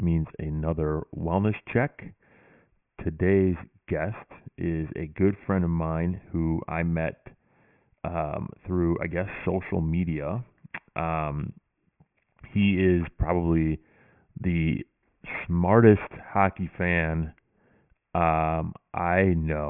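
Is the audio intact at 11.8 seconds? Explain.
No, aliasing runs through 11.8 seconds and the whole clip. Content above about 3 kHz folds back into wrong pitches, roughly 20 dB down, making sibilants gritty and metallic.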